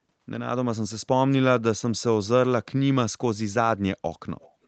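From 4.4 to 4.51 s a faint delayed copy of the speech, roughly 30 dB down, trails the original by about 244 ms. This is echo leak, likely a far-end loudspeaker echo the canceller missed. Unlike room reverberation, it is a distinct repeat after a clear gap.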